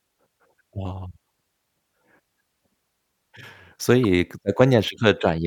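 Speech, with a corrupt frame decoded at about 4.04 s: one damaged compressed frame was played despite flipped bits, so misread gains and codes throw energy to wrong frequencies, a brief glitch peaking near -20 dBFS, visible as a narrow vertical smear on a spectrogram.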